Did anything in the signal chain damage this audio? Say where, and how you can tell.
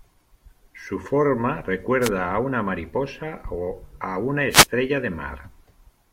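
Yes. Two wireless microphone noise hits damaged this speech before it was digitised, in the analogue FM radio link. Brief swishes of static hit the speech from 2.01 to 2.10 s and again from 4.50 to 4.67 s. Reflected paths cancel the carrier, and the receiver's own noise rises through the speech. Unlike network packet loss, the gaps fill with broadband hiss rather than silence or smeared repeats, and the level swells and fades instead of cutting sharply.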